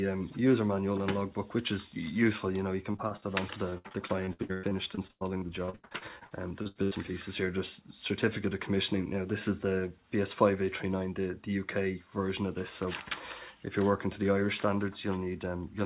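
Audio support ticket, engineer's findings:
Repeated packet loss (robotic sound), 2.92–3.24 s and 3.70–6.93 s: choppy stretches with pieces missing. Jitter buffer concealment repeats the last sound over about a third of each span, five short holes first, then 26 holes up to 102 ms. Waveform shows repeated, copied cycles. Spectrogram shows smeared, stuttering bands, all under the 4 kHz ceiling, which fits a G.711 mu-law call path.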